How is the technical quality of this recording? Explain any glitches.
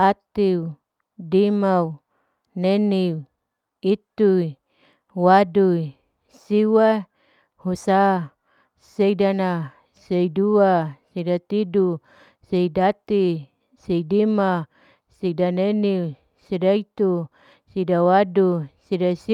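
No technical glitches can be heard anywhere in the recording. The speech runs without any interruption, disturbance or change in the sound that would point to a fault in how it was captured or carried.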